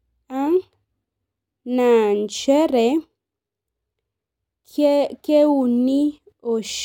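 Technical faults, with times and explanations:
No technical faults can be heard in the speech recording; the signal holds steady and continuous throughout.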